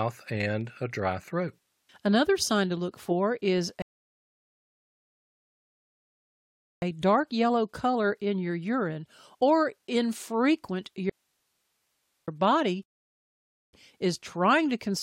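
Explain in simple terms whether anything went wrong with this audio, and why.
Twice the player ran out of downloaded audio and had to wait, a rebuffering stall. After "to look for is", the speech halts into silence from 3.82 to 6.82 s, adding 3 seconds, then resumes exactly at "dark yellow color in". A shorter stall, about 0.9 seconds, follows from 12.83 to 13.73 s. No speech is lost in either.

From 11.10 to 12.28 s, just after "your urine or infrequent", there is an audio dropout to a faint residue. The speech is cut off abruptly for about 1.2 seconds, leaving only a soft hiss. That part of the speech is gone. The likely cause is that the incoming signal was lost while the equipment after the break kept running.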